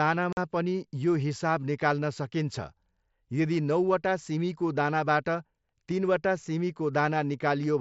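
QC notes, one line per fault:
0.33–0.37 s, unconcealed Bluetooth headset packet loss: the speech drops out for about 45 ms. Voice packets between headset and phone never arrived, and silence or an idle pattern filled the gap. The hole has abrupt edges, and its length fits six lost headset frames on the mSBC link.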